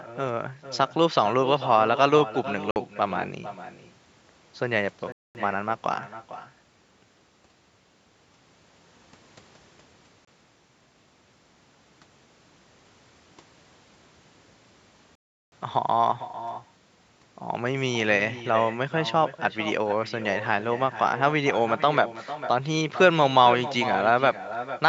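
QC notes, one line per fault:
throughout: echo with no canceller. Every phrase returns as a thinner copy about 13 dB down, roughly 0.4 s late, picked up from a far-end loudspeaker and never removed.
2.71–2.76 s, 5.12–5.35 s, 10.25–10.28 s, 15.15–15.52 s: Bluetooth stall. The sound drops to silence for 51, 228, 25 and 367 ms, then resumes, likely from interference delaying packets and draining the headphone buffer.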